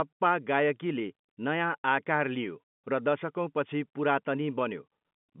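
No technical faults are audible in this speech; it carries the ordinary character of G.711 telephone coding, with the sound confined to a line band of roughly 150 Hz to 3.5 kHz and nothing above 3.8 kHz.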